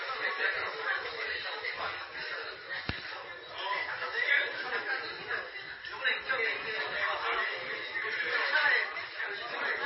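Everyday sound, with heavy MP3 compression damage running the whole way through, likely from a very low bitrate around 24 kbps. The sound is watery and swirly, with smeared attacks. A spectrogram shows a hard ceiling at 5.6 kHz and flickering, patchy gaps below it.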